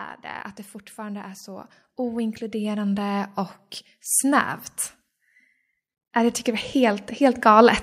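From 0.22 to 3.39 s there's automatic gain rising: the AGC decided the input was too quiet and pushed its gain up by about 11 dB over roughly three seconds, so the speech and the background noise swell up together. It does it again from 6.14 to 7.78 s, climbing about 6 dB. Both times the whole sound gets steadily louder, room tone included.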